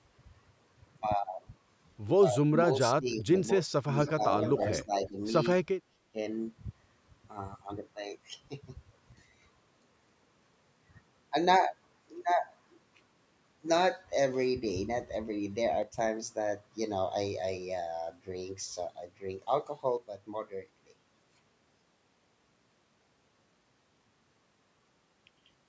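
This is a speech recording of a call. Between 2.36 and 6.18 s the echo canceller likely could not tell the local talker from loudspeaker echo during double talk, so it turned both down. The speech suppressed in double talk sinks by roughly 15 to 35 dB in pieces at 2.36–3.36, 3.58–3.98, 4.84–5.17 and 5.61–6.18 s. In the same stretch, the loudspeaker side's canceller likely left part of its loudspeaker pickup unremoved, and that echo leak returns a copy 284 ms late, at about 20 dB below the speech at 4.06–4.24 s and at about 10 dB below at 4.4–4.83 s. Later, one stereo channel is likely lost before the mono mix, and because that channel drops out, the sound abruptly falls by 6 dB at 9.12–9.42 s, at 15.83–15.98 s, and from 19.97 s to the end.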